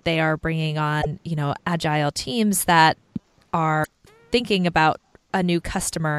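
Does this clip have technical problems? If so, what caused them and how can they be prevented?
Yes. In two places the compressed stream carried damaged data, so the decoder misread those frames, lost sync and had to hunt for the next valid frame header. Each time, this comes out as a short glitch of about 80 ms, first from 0.98 to 1.06 s, right after "they are bringing" and before "you know agile teams", and again from 3.80 to 3.88 s. Prevent it by using error-checked transport and storage, such as frame CRCs with retransmission, and by keeping metadata out of the audio payload.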